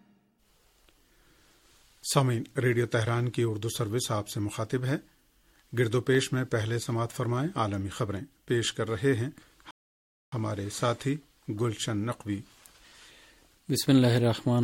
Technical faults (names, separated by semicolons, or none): rebuffering stall